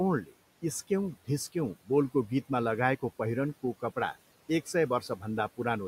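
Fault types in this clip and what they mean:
Speech cut by the noise suppressor: the suppressor mistook short stretches of speech for background and turned them down along with the room noise, which sits about 20 dB below the speech. It happens from 0.24 to 0.34 s, with a drop of about 14 dB, and again from 5.01 to 5.24 s, dropping about 9 dB. On a waveform the envelope sags suddenly there. On a spectrogram the speech energy thins to a faint, patchy band before recovering.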